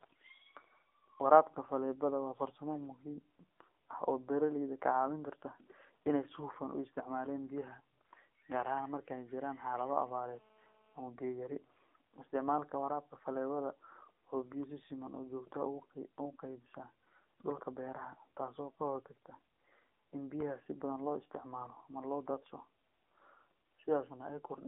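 Speech heard through an AMR narrowband mobile codec for its whole length: the band runs roughly 250 Hz to 3.6 kHz with nothing above 3.7 kHz, and the codec damage is plainly audible as buzzy, synthetic-sounding speech, which fits a low AMR-NB mode around 7.4 kbps. From 9.96 to 11.01 s, after "jiraan xaalado" and ending before "biyo yari", a GSM phone buzz appears. It is a hard, raspy 217 Hz tone with dense harmonics, about 32 dB below the speech. It is nearly steady, which points to a nearby 2G phone in a call whose transmit bursts are being rectified by the audio circuitry.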